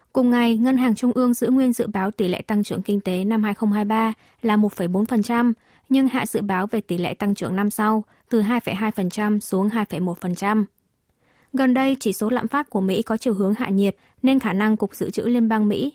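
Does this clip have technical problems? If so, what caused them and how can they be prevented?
No, there are no technical problems to fix in this speech clip. It has been through Opus voice compression at 24 kbps in hybrid mode, which keeps the full band of the recording, and the traces of that coding are light.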